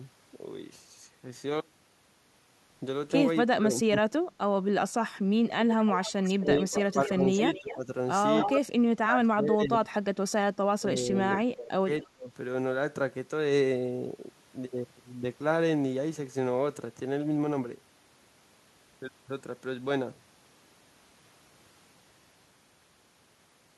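From 3.51 to 4.04 s the speech dips by about 20 dB. This is speech suppressed in double talk. The likely cause is an echo canceller turning its own talker down along with the loudspeaker echo while both talked at once.

From 5.67 to 7.76 s there is an echo leak. A delayed copy of the speech trails 262 ms behind, about 10 dB below it. It is likely sound from a loudspeaker that the canceller did not fully remove.

During and just after that stretch the speech dips by about 10 dB from 6.23 to 7.23 s, and again from 7.59 to 7.88 s. A short scrap of echo returns from 8.38 to 8.57 s, only about 5 dB down.

The suppression then deepens. It reaches about 30 dB from 8.54 to 9.9 s and about 25 dB from 10.78 to 12.31 s.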